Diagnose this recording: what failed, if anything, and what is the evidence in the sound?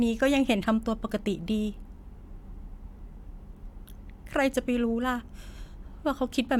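Nothing in the speech stood out as faulty on listening, with no sign of any stage in the chain having failed.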